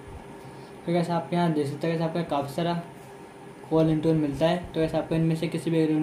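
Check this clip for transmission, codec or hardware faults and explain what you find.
No faults detected.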